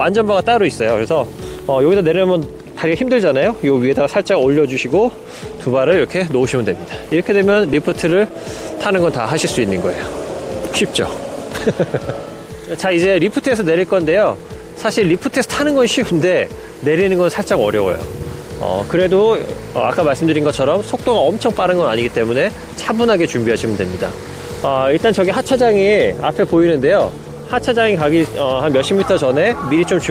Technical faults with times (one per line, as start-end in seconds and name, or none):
7.53-8.31 scattered short gaps
8.87-9.75 jitter buffer slow-down